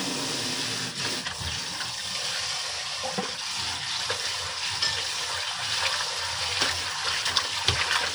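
No technical faults can be heard anywhere in the signal of this everyday-sound recording.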